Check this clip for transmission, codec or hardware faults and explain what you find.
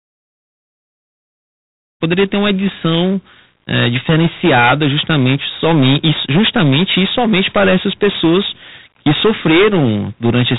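Hard clipping runs through the whole recording. The signal was driven roughly 18 dB beyond what the chain could pass, so about a tenth of the samples hit the ceiling and were sliced flat. Those squared-off peaks add harmonics far up the spectrum, so every loud syllable of speech carries a harsh, buzzing fuzz. Even the brief fade-in that finishes by 2.02 s is already distorted as it reaches full level.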